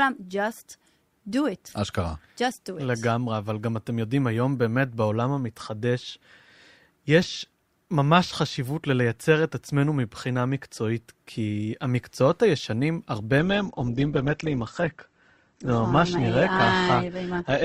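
At 13.39 s the speech switches abruptly to an adaptive stream at a lower bitrate, and stays that way until the end at 17.65 s. There is no gap. The player dropped to a cheaper version of the stream, likely because the connection slowed. Nothing is left above 8.1 kHz, so the top end goes dull. Codec artefacts rise. The sound fits Opus falling from 64 to about 12 kbit/s.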